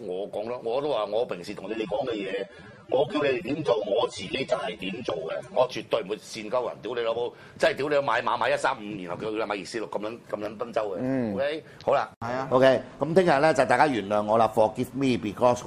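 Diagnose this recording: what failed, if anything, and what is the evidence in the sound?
From 1.66 s to 5.66 s the sound abruptly loses its top end, with nothing left above about 13.7 kHz, and takes on a thinner, more processed texture. It snaps back to full bandwidth with no gap at either edge. This is an adaptive stream at a lower bitrate, a network and codec fault. For those four seconds the player switched to a leaner rendition of the stream, which fits a drop from AAC at around 96 kbit/s to around 24 kbit/s.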